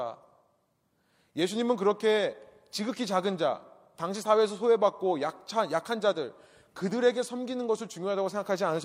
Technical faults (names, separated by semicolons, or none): none